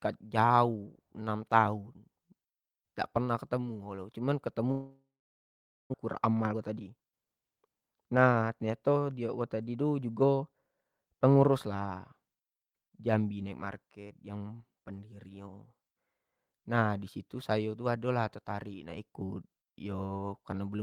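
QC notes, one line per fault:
4.71–5.96 s, long network dropout: The sound breaks up, likely because incoming audio ceased for over a second, and about 1.0 s of the original never reaches the listener. The receiver first extends the last sound into a fading buzz, then leaves roughly 0.84 s of silence before audio resumes further along, so the passage jumps ahead with a section missing rather than pausing and continuing where it left off.
6.06–7.42 s, jitter buffer speed-up: Right after the gap, the receiver is holding more buffered audio than it wants, so it trims tiny pitch-period-sized slices again and again to draw the delay back down, removing around a fifth of a second in total. Speech here runs at about 112% speed with its pitch unchanged, which comes across as briefly hurried, clipped delivery rather than a higher voice.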